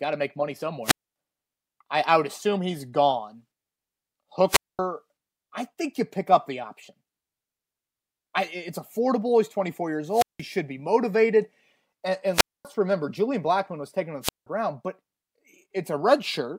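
The wireless microphone's radio signal repeatedly faded below the receiver's squelch threshold, muting the speech in five wireless microphone squelch dropouts: at 0.84–1.16 s, 4.48–4.79 s, 10.10–10.44 s, 12.33–12.65 s and 14.22–14.47 s, each a short hiss then a near-silent hole of roughly 170–250 ms.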